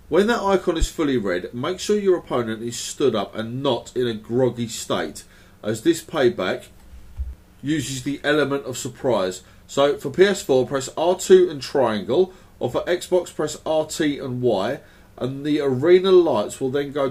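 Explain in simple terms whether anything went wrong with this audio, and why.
A loud pop hits at 0.82 to 0.85 s, a single sharp thump well above the sound, likely an electrical jolt from a plug or switch. Unlike a dropout, the sound carries on underneath.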